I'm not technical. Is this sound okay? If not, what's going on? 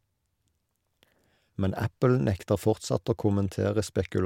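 Yes, nothing in this speech recording points to a technical fault in the signal.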